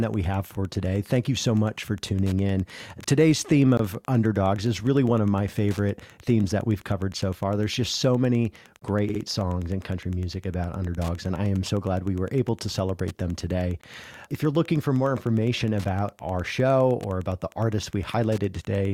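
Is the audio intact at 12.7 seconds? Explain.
No, a faint steady ticking about ten times a second runs under the speech there and throughout: Wi-Fi interference, a nearby radio's 102.4 ms beacon rectified by the audio circuit, well below the speech.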